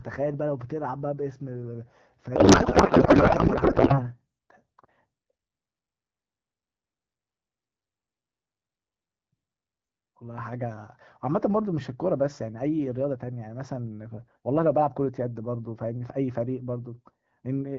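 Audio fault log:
2.35–4.10 s, codec payload misread: the speech turns into garbled, warbling noise that barely tracks it. The AMR-WB frames are unpacked with their fields in the wrong places, which fits octet-aligned packing read as bandwidth-efficient. Unlike packet loss, nothing drops out; unlike low-bitrate roughness, it starts and stops abruptly.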